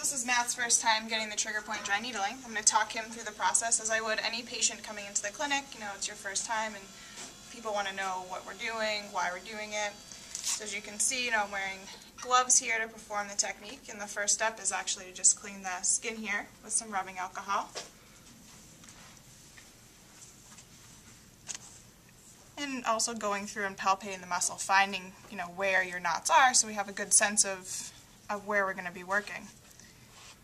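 No faults turn up anywhere in the recording, with no dropouts, clipping, glitches or level jumps to report.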